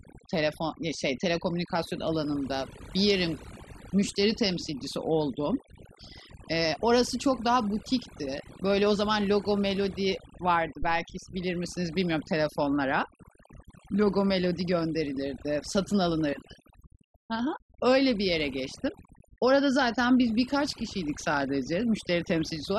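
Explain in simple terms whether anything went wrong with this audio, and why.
Two things went wrong. Throughout the speech, there's overdone noise removal. A cleanup tool was pushed so hard that it carved away quiet parts of the voice along with the hiss. Gaps fall to near silence with faint twinkly specks.

Then, from about 10.83 to 11.11 s, there's a phantom power thump. Someone switched the microphone's power supply on a live input, and that sudden jump came through as a deep bump that dies away quickly, within about 64 ms.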